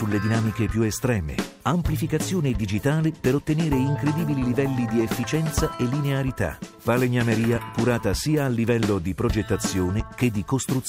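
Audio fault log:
No faults logged; the audio holds steady throughout with nothing to report.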